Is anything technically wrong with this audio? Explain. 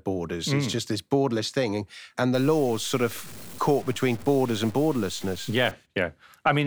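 Yes. From 2.34 to 5.71 s the speech turns grainy, likely from low bit depth without dither (about 6-bit truncation). Unlike steady hiss, the grit follows the signal and changes with it.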